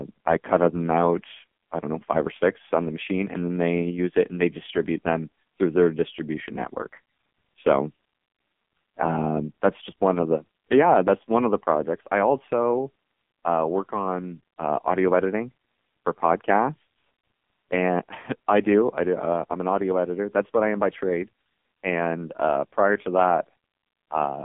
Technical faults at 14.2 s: AMR narrowband mobile codec

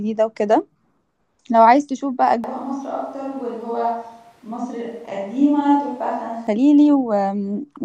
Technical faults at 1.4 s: none

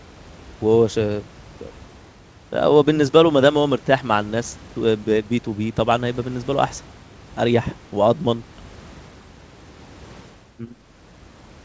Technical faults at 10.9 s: none

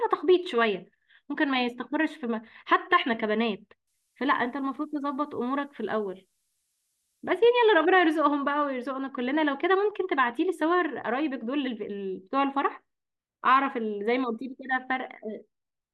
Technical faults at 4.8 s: switching supply whistle

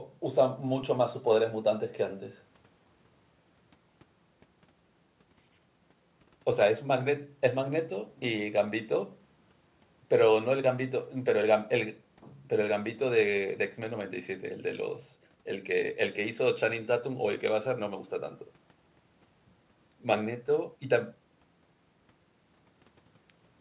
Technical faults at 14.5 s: none

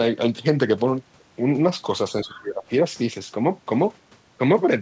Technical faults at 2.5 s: speech suppressed in double talk

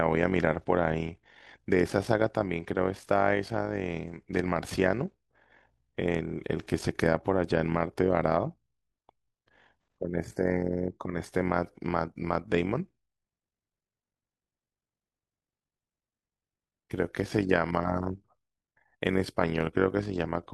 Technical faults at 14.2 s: overlap-add ripple

